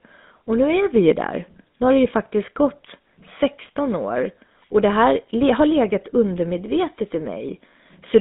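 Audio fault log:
Throughout: GSM full-rate codec. The speech is squeezed into a phone band of roughly 200 Hz to 3.7 kHz with plainly audible buzzy, gravelly roughness, which fits a 13 kbps pulse-excited vocal-tract model.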